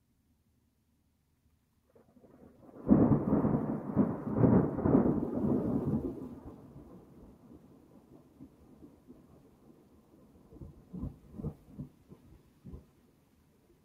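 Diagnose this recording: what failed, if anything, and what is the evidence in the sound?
A speech noise suppressor was left on in the call processing stage, and it runs throughout. Onsets mostly come through. Sustained parts and decaying tails sink, with level swinging by around 10 dB. The suppressor treats steady, held sound as noise and pulls it down, so the audio pumps and thins.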